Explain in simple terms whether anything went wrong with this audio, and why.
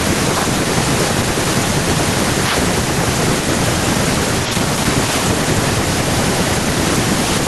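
Nothing went wrong with this speech recording. A little background noise from the room sits well below the talking, and the very highest frequencies are trimmed off the way an online call normally does it, so neither is a fault.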